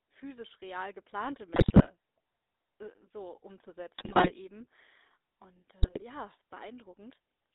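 From start to finish the speech carries the GSM full-rate codec's buzzy, gravelly roughness: the vocal tract is modelled and excited by sparse regular pulses, so a spectrogram shows energy squeezed into a 300 Hz to 3.7 kHz line band, consistent with a 13 kbps stream.

GSM bit errors strike at 1.54 to 1.88 s, right after "physisch real geplante", again at 3.98 to 4.31 s and at 5.82 to 6.03 s. Corrupted filter, pitch and gain values produce squawks, pops and gargling, visible as smeared spectral frames and sudden waveform level jumps.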